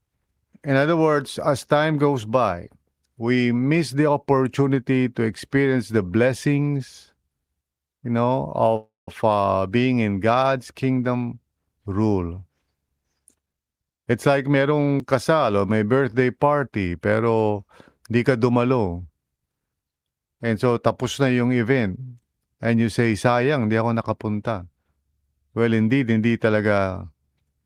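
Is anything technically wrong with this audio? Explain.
Yes, there are two faults.

At 8.76 to 9.08 s, just after "you know", there is a call audio freeze. Packets were likely held up in transit, so the jitter buffer ran dry and the receiver extended the last sound to fill about 310 ms. This is heard as a fading buzz or hiss that drops to about 170 ms of silence. The speech then resumes where it stopped, so nothing is lost, but the delay grows by 310 ms.

From 13.18 to 14.88 s, leading into "kasal o may birthday", there is a jitter buffer speed-up. The buffer was holding more audio than its target, so the receiver repeatedly cut out short pitch-period pieces, around 300 ms in total, to shrink the delay. The speech plays at 118% speed with its pitch unchanged, so it sounds hurried.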